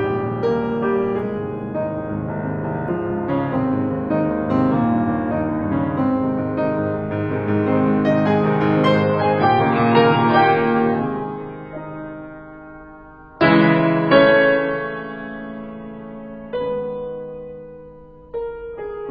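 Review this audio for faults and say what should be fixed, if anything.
At 9.03 s the music abruptly loses its top end and stays that way through to the end: nothing survives above about 5.4 kHz, and the remaining sound turns smeary and grainy, with no gap at the switch. This is an adaptive stream at a lower bitrate. The player dropped to a much cheaper version of the stream, which fits a fall from around 96 kbit/s to around 12 kbit/s AAC, trading bandwidth for audible codec damage. To prevent it, give the player enough buffer and a sensible lowest rung in the bitrate ladder so that brief slowdowns do not force it onto such a starved encode.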